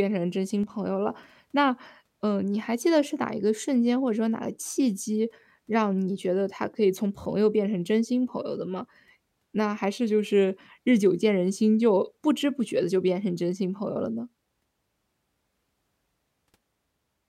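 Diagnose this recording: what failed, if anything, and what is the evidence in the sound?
One channel drops out from 0.63 to 0.70 s. The speech abruptly falls by about 6 dB for those 60 ms, then recovers. In the mono sum, only one side was contributing. The likely cause is a momentary break in the analogue wiring, such as a loose connector.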